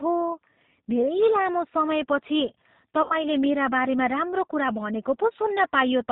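From the start the speech runs through the G.729 codec at 8 kbit/s. Nothing above 4 kHz survives, and the pulse-built excitation makes it plainly rough and synthetic. Then from 3.02 to 3.16 s there's VoIP packet loss concealed by the speech codec. About 80 ms went missing, which fits four lost 20 ms packets. The decoder stretches the last pitch and filter into a fading buzzy tone or coloured noise, and the voice stays weak or distorted after packets return, into "मेरा बारेमा राम्रो कुरा".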